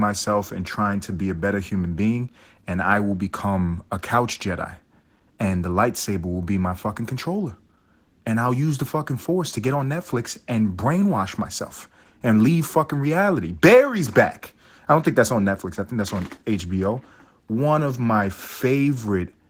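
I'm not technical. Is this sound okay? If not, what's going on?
No. The speech is affected by Opus voice compression throughout the clip. This is a way of shrinking audio files for calls. It rebuilds the lower part of the voice from a simple model and fills in the higher part only roughly. Here the file was squeezed hard, and the damage is plainly audible. The voice sounds a little hoarse and slightly robotic, and the crisp top end is rough rather than clean.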